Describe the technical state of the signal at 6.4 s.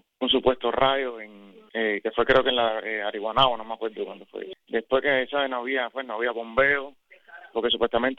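Nothing at 6.4 s points to a technical fault, and the signal is intact at that moment.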